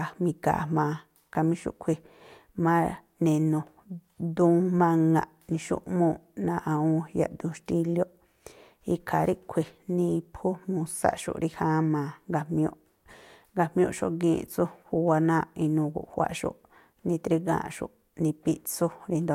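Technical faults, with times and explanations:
No technical faults detected.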